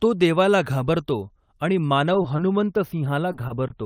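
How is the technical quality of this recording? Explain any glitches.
The speech has five brief glitches, all short concealed packet loss, clustered in the second half: 2.22–2.26 s, 2.36–2.40 s, 3.32–3.36 s, 3.48–3.52 s and 3.68–3.72 s. Each sounds like a momentary smear or small wobble lasting about 40 ms, and a quick consonant can seem to blur or drop out. Around 20 ms of audio arrived too late or not at all, and the decoder papered over the gap by extending the preceding sound before blending back into the real signal.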